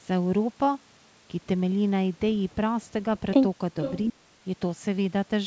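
From 3.8 to 3.99 s there is an echo leak: a faint delayed copy of the speech, lagging by 463 ms and sitting around 10 dB below it, likely because a far-end echo canceller let loudspeaker pickup through. On a spectrogram it appears as a weaker, time-shifted repeat of earlier harmonic patterns.

From 4.07 to 4.24 s the speech is suppressed in double talk, likely because the echo canceller mistook simultaneous talk for echo and ducked everything. The level plunges by roughly 35 dB for about a sixth of a second, seen as a near-empty gap in the waveform envelope and spectrogram.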